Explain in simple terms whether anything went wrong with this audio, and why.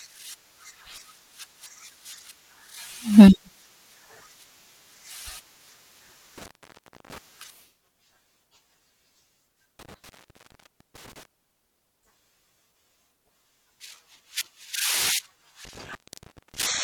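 The speech drops out three times because of an intermittent contact, which is a loose cable or plug briefly losing its connection. You get a crackle, then near-silence: from 6.38 to 7.18 s (about 0.64 s open), 9.79 to 11.25 s (0.86 s), and 15.65 to 16.79 s (0.59 s).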